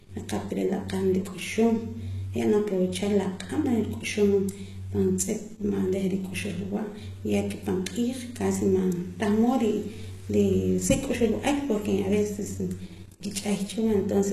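From start to finish, the sound has a gritty, metallic treble, with s sounds turning lispy. The likely cause is HE-AAC compression at a bitrate low enough to fit around 16 kbps: only the lower spectrum is properly coded, and the upper band is rebuilt by copying lower content upward, so its harmonics fail to line up. On a spectrogram, the top looks like repeated, blocky copies of lower bands, with nothing above 12.3 kHz.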